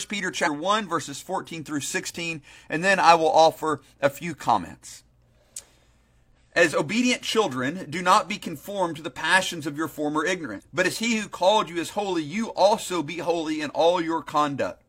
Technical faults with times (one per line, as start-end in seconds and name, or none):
0.42-0.48 damaged data in a compressed stream
6.32-6.37 damaged data in a compressed stream
10.55-10.61 damaged data in a compressed stream